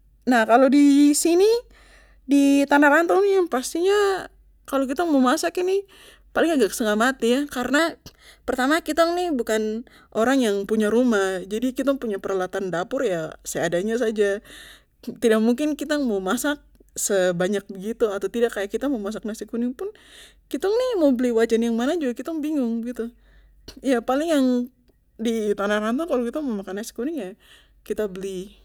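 A clock-matching stage in the playback chain likely corrected drift by jumping its rate in single steps, leaving four drift correction steps in this speech clip. From 3.11 to 3.71 s and from 25.47 to 26.76 s the audio runs 6.5% slow and drops 116 cents, just over a semitone. From 7.79 to 10.15 s and from 20.76 to 21.51 s it runs 6.5% fast and rises 109 cents. Each time, pace and pitch shift together.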